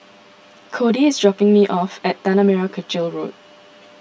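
Throughout the speech the sound is hollow and phasey, with fixed notches in the spectrum. This is channel delay (comb filtering): one channel runs late by roughly 10 ms, and summing to mono cancels content at evenly spaced frequencies, starting near 50 Hz.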